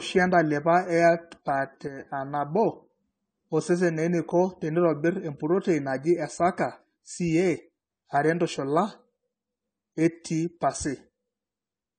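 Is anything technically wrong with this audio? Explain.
Yes, there are two faults. Throughout the speech there is a layered, smeared quality with nothing above 9 kHz. This is likely transcoding between lossy codecs, and the mix of artefacts points to an MP3 stage followed by low-rate AAC-LC. The second encoder spends its scarce bits re-coding the first one's artefacts, so both sets are heard together. A spectrogram shows a hard ceiling at 9 kHz and patchy, smeared high bands.

From 1.88 to 2.00 s the level falls abruptly by about 6 dB and then returns. The likely cause is one channel dropping out. With only one channel feeding the mono sum, shared content loses half its amplitude. The waveform shows a brief, sharp-edged dip in the envelope.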